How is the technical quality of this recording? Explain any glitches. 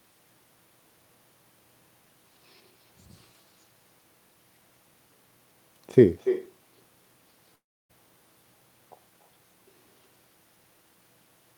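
The recording has two clear problems: a persistent echo and one brief gap.

Echo with no canceller runs through the whole clip. The far end's loudspeaker output is being picked up by its microphone and returned unfiltered, so every phrase is followed about a third of a second later by a thinner copy roughly 10 dB quieter.

From 7.55 to 7.91 s the speech drops out. A short fading fill trails off into near silence, and the speech resumes with about 0.34 s missing. This is likely a long network dropout, where packets never arrived and the receiver concealed the gap.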